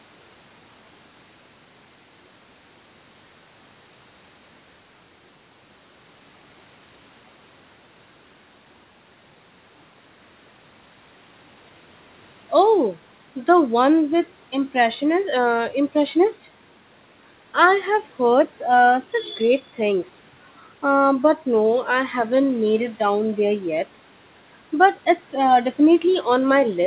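No technical faults are audible.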